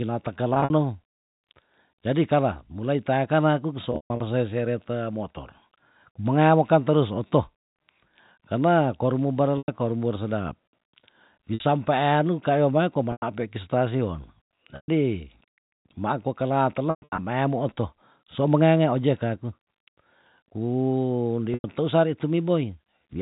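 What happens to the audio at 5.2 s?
Nothing goes wrong at 5.2 s: the speech continues without interruption there, carried through the narrow G.711 telephone band with its faint level-following quantisation hiss.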